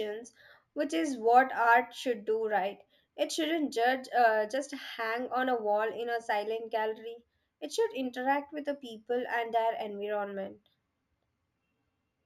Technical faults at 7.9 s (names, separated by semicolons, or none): imaging from linear upsampling